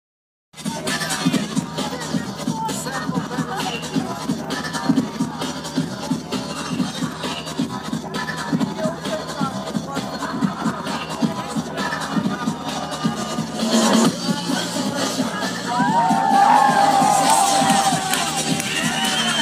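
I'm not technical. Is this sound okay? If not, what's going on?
No. From 3.97 to 5.26 s there is a train of clicks: around ten matching ticks, evenly spaced at about six per second, likely from electrical interference or a faulty connection or power supply.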